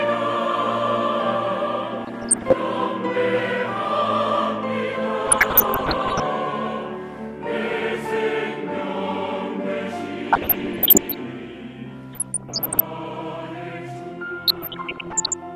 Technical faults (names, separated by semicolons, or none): DAB burbling